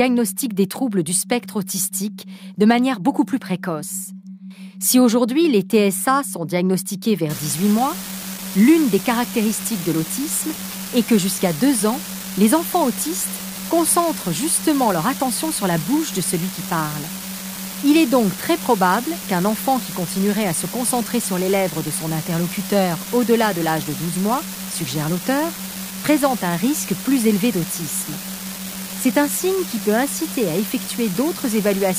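From 7.30 s to the end, an unreliable data bit adds a steady crackling fizz that continues through pauses. One marginal data line flips randomly, so each error is an identical spike of about -18 dBFS, seen as scattered equal-height needles on the waveform and broadband speckle across the spectrogram.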